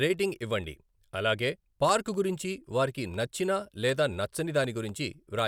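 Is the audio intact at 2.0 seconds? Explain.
No. At 2.0 s the sound sits inside a run of periodic USB or driver dropouts lasting from 0.14 to 5.39 s. Every 0.25 s something blocks the audio path, and around half a millisecond of signal is replaced by silence, about twenty times in all. Each gap is heard as a small regular tick while sound is present. On a waveform these show as brief flat notches, and on a spectrogram as thin evenly spaced vertical broadband lines.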